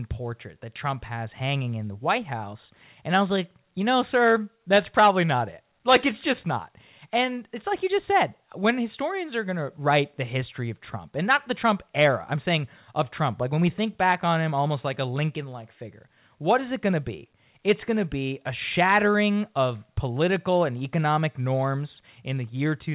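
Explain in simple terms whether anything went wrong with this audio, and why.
Nothing went wrong with this recording: the speech came through an ordinary call connection using a standard telephone-style codec, which is why it sounds somewhat narrow with nothing above 4 kHz, and that limit is simply how such a call line carries sound, not a fault.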